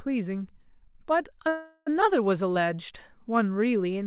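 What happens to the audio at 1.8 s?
Call audio freeze, 1.48 to 1.88 s: delayed packets likely emptied the jitter buffer, so the last sound drags on as a fading buzz, then speech resumes intact.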